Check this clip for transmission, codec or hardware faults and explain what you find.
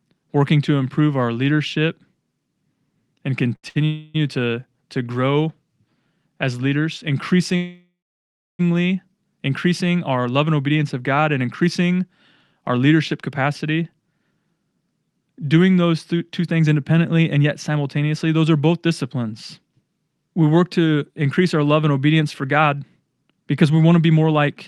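The speech has three kinds of delivery problems. The first cluster sits around the 4-second mark.

Short stalls from a late packet hit at 3.55 s and 3.69 s. The jitter buffer ran dry, so the last sound gets held for 77 ms and then 60 ms before carrying on.

A call audio freeze follows from 3.85 to 4.16 s, with the sound stretched into a fading buzz for nearly 0.3 s. A second one runs from 7.56 to 8.61 s, just after "as leaders". The hold decays into about 0.65 s of silence before the speech resumes where it stopped. Both are likely packets held up in transit.

The jitter buffer speed-up comes in two stretches. From 16.14 to 17.77 s, just before "those are both disciplines", the speech runs at 107% and loses roughly 150 ms. From 22.2 to 24.48 s, after "increase our love and", it runs at 109% with about 200 ms cut. The pitch stays put but the delivery sounds rushed, because the buffer is trimming tiny pitch-period slices to shed excess delay.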